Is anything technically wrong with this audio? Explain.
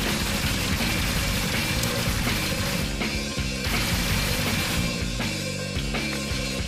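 Yes. At 1.83 s there is one electrical switching spike, a sharp snap lasting about 7 ms and peaking around -5 dBFS, sitting on top of the audio rather than replacing it. The likely cause is a nearby switch, motor or static discharge arcing briefly and the audio line picking up that burst. On a waveform it appears as a single narrow vertical spike. On a spectrogram it shows as a thin vertical line spread across the frequency range.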